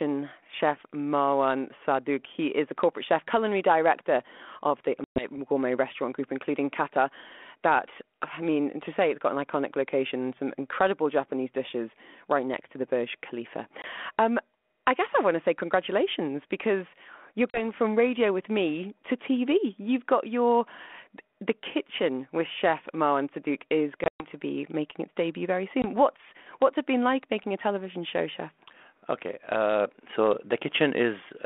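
At 5.04–5.27 s after "culinary director of the", 13.82–13.85 s, 17.50–17.58 s, 24.04–24.26 s before "to be making its", and 25.82–25.85 s after "making its debut very", packet loss on an ADPCM call punches hard-edged silent holes of about 120, 20, 40, 140 (in scattered gaps across 160 ms) and 20 ms. Each return comes back slightly distorted until the decoder's predictor and step size re-track the sender, within tens of milliseconds.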